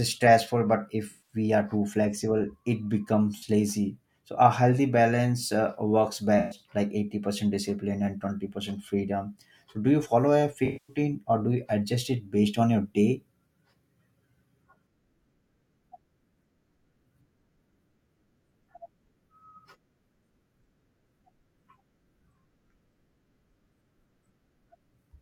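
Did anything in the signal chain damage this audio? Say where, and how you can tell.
Yes: AAC frame loss with concealment in the codec, at 1.09–1.36, 3.37–3.43, 6.38–6.59 and 10.65–10.96 s. The decoder re-spun the last good spectrum, so each gap shows on a spectrogram as a smeared, static block.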